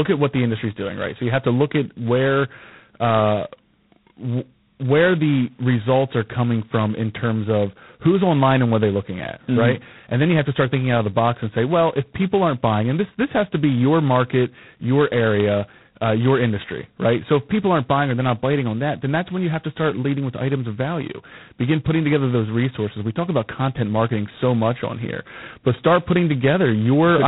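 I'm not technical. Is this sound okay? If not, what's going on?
No, the speech has G.726 ADPCM damage from start to finish: a harsh, rasping hiss that swells with loudness, and nothing above about 3.9 kHz, so it sounds dull and phone-like.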